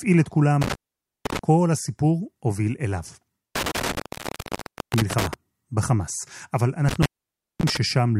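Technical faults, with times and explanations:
0.61–1.39 s, 3.56–5.34 s and 6.89–7.77 s: intermittent contact. A loose plug or cable connection breaks and remakes three times, and the speech drops out while the circuit is open, for about 0.50 s, 0.96 s and 0.54 s respectively. Crackle marks each break and reconnection as the contact scrapes and bounces, and faint hiss fills the gaps because the signal path is physically disconnected.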